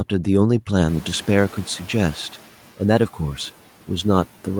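Speech, and the room noise jumps by about 21 dB at around 1 s, landing about 22 dB below the speech. The noise suppressor catching up is audible from 0.88 to 2.37 s: its estimate lags, so the noise comes through with less reduction at first, then sinks by about 7 dB over roughly 1.5 s.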